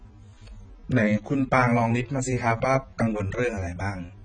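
A low-bitrate encode has likely passed this speech through AAC compression, with the encoder starved of bits across the whole clip. The sound points to AAC-LC at around 16 kbps: there is nothing above 9.6 kHz, and the damage is heavy. The spectrum has gaps where bands were discarded or replaced with substitute noise. The result is dull, smeared speech with a warbling, fizzy texture on sustained sounds and sibilants from start to finish.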